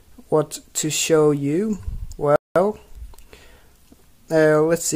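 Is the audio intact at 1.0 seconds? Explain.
Yes, at 1.0 seconds the audio plays through intact, with no dropout, click, distortion or other fault to be heard at that point.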